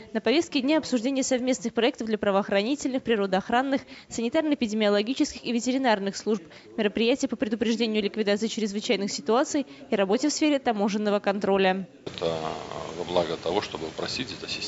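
No technical faults can be heard; the audio carries the ordinary character of a call's microphone processing, with the lowest bass trimmed and nothing above 8 kHz.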